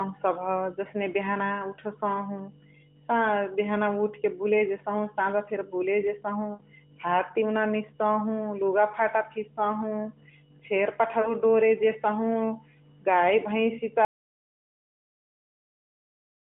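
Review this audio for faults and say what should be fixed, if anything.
Lost AMR speech frames at 6.54–6.61 s, right after "साझा फेरी बुले जेसहु", and at 11.22–11.34 s. The decoder repeats the last good frame with falling gain, smearing then thinning the speech. The gaps fit three and two 20 ms frames.

Audio dropout to silence from 14.05 s to the end. The signal cuts to silence with no room tone, likely from a lost input or link while recording continued.

Prevention: use a more robust channel or error protection on the AMR narrowband path, whose 150–3500 Hz band shows only light codec damage, and monitor input presence so a dead feed stops or flags the recording.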